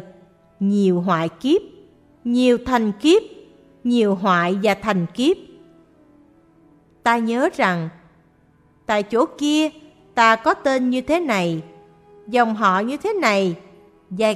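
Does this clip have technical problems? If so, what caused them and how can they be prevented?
No, nothing stood out as a technical problem on listening, so there is nothing here that calls for prevention.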